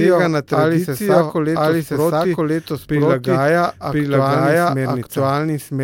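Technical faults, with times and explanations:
Throughout, doubled audio track: the speech is accompanied by a second, full-band copy trailing about a second behind and about as loud as the original, so every phrase returns intact over whatever follows it. The likely cause is the same signal being captured twice, once through a slower path. Unlike an echo or room reverb, the copy does not fade, repeat, or take on any room colour; it is simply a second identical layer.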